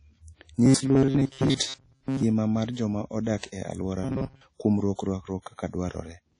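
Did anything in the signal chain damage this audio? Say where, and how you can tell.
Yes. A transform codec, likely low-bitrate WMA around 32 kbps, smears the whole clip: audible ringing, washy hiss, and nothing above 10.1 kHz.

At the buffer stage, delivery probably stalled from 0.65 to 2.23 s, just before "mar joma", and again from 4.04 to 4.46 s. Short blocks repeat every 7.5 ms, replacing most of the audio with a rigid 134 Hz robotic buzz.

Pre-echo, also from the codec, comes at 3.38 s, after "mar joma". Block-wide quantisation noise spreads hiss across 51 ms before the attack, which sounds softened.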